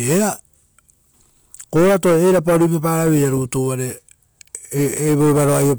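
No technical fault can be heard anywhere in this recording of speech, which carries through without any break, distortion or other disruption to the signal.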